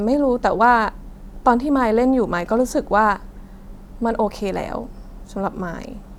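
Nothing in this recording trips any alarms; there are no technical faults to point to anywhere along it.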